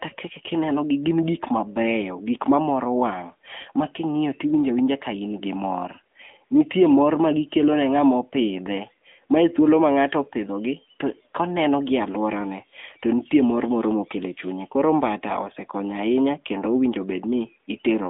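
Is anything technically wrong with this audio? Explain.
Yes. Throughout, the speech carries AMR narrowband mobile codec damage. Only 250 Hz to 3.6 kHz survives. The pulse-driven vocal-tract model sounds plainly buzzy, fitting a mid-rate mode near 10.2 kbit/s.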